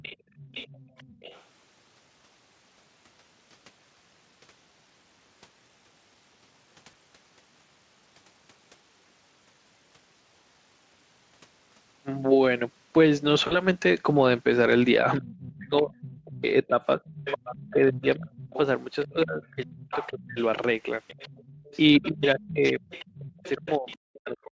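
An echo canceller that is likely not fully removing the loudspeaker signal lets the other side's voice leak through in this speech recording. From 0.0 to 1.43 s a second, fainter voice sits about 20 dB under the talker, and from 15.55 to 23.98 s it returns louder, about 15 dB below. It sounds like a secondary layer behind the main voice.

At 0.17 s the same canceller clamps the microphone while the loudspeaker plays. This is background gated by the echo canceller: the room sound dips by about 16 dB for roughly a fifth of a second, until 0.35 s, then comes back.

VoIP packet loss concealed by the speech codec occurs at 6.91 to 6.94 s and again at 13.47 to 13.61 s. The decoder fills the gaps by extending the last pitch and spectral shape at falling gain. The first gap fits a single 20 ms frame. The second fits about 40 ms, and its fading fill and the weakened voice afterward stretch the damage to roughly 140 ms.

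Speech suppressed in double talk is the likely cause from 15.2 to 20.38 s, where both sides overlap and the canceller turns everything down. The talker's voice drops by roughly 35 dB in pieces totalling around 3 s. The same happens from 21.99 s to the end, with cuts near 40 dB adding up to about 1.5 s.

All of this sits within a Speex-coded signal band-limited at 8 kHz.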